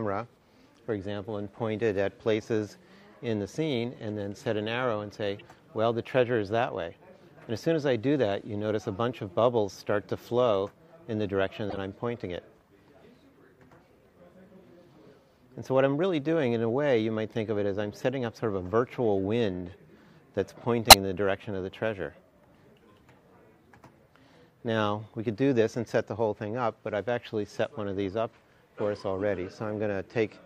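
Corrupt frame decoded at 5.39–5.41, 11.70–11.77, 15.10–15.12 and 20.89–20.93 s: damaged frames played anyway, giving brief chirps or noise bursts. The last is loudest, the third faint.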